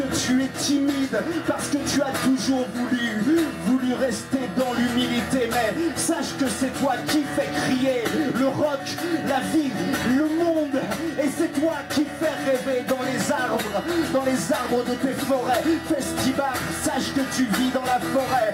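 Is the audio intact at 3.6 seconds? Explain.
No. At 3.6 seconds the audio carries sample clock jitter, which runs through the entire clip. The converter's timing wanders by what sounds like a few microseconds, so each sample lands slightly early or late, and the error scales with how steeply the waveform is changing. It comes through as a gritty hiss about 25 dB below the signal, swelling on loud, bright passages and disappearing in silence. On a spectrogram it appears as a diffuse noise haze that tracks high-frequency energy. On the waveform it is barely visible.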